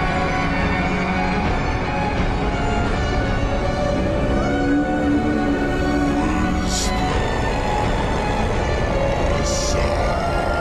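No technical faults can be heard in this audio.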